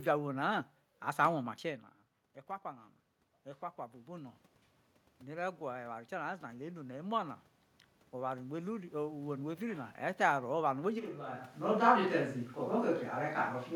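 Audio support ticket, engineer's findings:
Automatic gain rising, 5.23–7.44 s (about +4 dB after input fell about 13 dB) and 8.13–10.27 s (about +3 dB): AGC ramps slowly; background swells with voice, unlike talker movement.

Switch to a distant microphone, 11.0 s to end: sudden hollow, roomy, bass-thin sound, roughly 10 dB lower, heavier room noise. Likely close-mic dropout, camera mic fallback. Instant change, not gradual drift.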